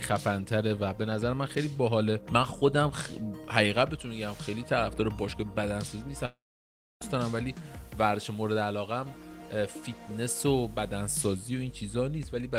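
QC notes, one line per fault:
6.25–7.03 s, long network dropout: about 0.76 s missing, likely from a network dropout. Brief fading buzz, then near-silence, seen as a blank spectrogram band and near-flat waveform.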